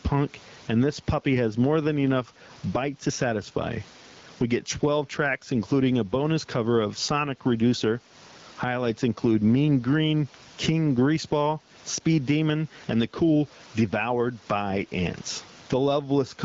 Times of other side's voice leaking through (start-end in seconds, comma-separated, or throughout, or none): none